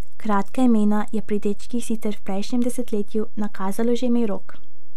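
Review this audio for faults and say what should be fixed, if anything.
The speech carries a DC offset for its whole length: the waveform sits shifted off zero by a constant amount, about -17 dBFS. You won't hear it as a tone, but it eats headroom on one side, so peaks will clip sooner than they should, and it shows up as a steady spike at 0 Hz on a spectrum view. A high-pass filter around 20 Hz or a DC-removal pass will sort it. Going forward, check the interface or preamp for a biased input and keep a DC-blocking filter in the recording chain.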